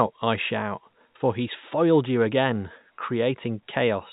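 No technical faults occur anywhere in the speech, and its narrow telephone-band sound comes from G.711 coding working as it normally does.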